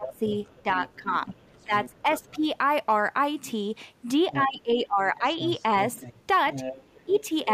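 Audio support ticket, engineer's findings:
Speech suppressed in double talk: talker dips 0.0–2.45 s (about 15 dB), 4.33–5.4 s (about 20 dB), 7.05–7.48 s (about 10 dB). Waveform shows envelope notches, spectrogram shows fading upper bands. Likely echo canceller ducking both voices during overlap.

Other side's voice leaking through: second voice 0.06–2.38 s (about 20 dB under talker), 4.31–4.43 s and 5.26–7.24 s (about 10 dB under). Spectrogram shows a second, weaker harmonic pattern under the main one. Likely residual loudspeaker echo the canceller didn't remove.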